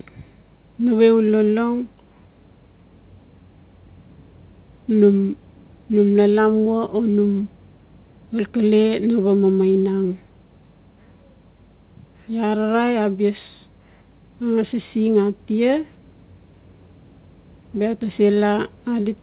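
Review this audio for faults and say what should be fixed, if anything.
Nothing stood out on listening, so there is nothing here that needs fixing.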